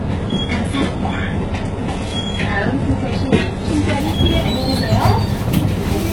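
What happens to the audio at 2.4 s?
At 2.4 s the adaptive stream is still starting at a low bitrate, from 0 to 4.0 s, consistent with HE-AAC near 12 kbit/s. Nothing above 11.4 kHz comes through, the treble sounds synthetic, and artefacts are strong until quality jumps at 4.0 s.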